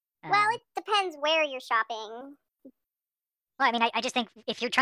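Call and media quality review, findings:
Speech high and rushed throughout, running 1.45x speed with pitch up 6.45 semitones together. Wrong sample rate at playback: samples clocked out faster than captured, no resampling. Fits 22 kHz capture played at 32 kHz. Check rate negotiation.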